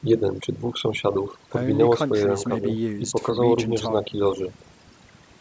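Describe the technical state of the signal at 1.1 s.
At 1.1 s the speech carries overdone noise removal, which runs throughout the clip rather than being a local event. The noise suppressor is set too aggressively: any frequency band that sits close to its noise estimate is pulled far down or muted, and the softer components of the speech are removed along with the noise. The background drops and breaks up into twinkling, chirpy specks. The call microphone processing is also present, with its high-pass filter trimming the lowest bass and nothing above 8 kHz.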